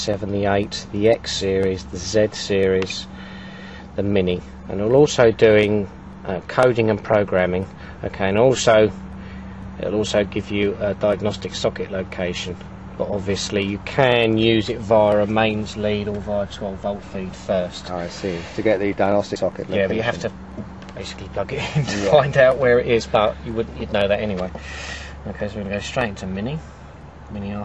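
No technical faults can be heard in the clip.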